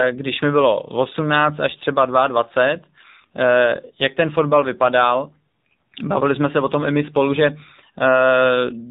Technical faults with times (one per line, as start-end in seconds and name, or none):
0.00-8.90 AMR narrowband mobile codec